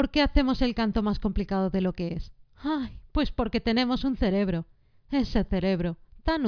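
No technical faults are audible anywhere in the recording.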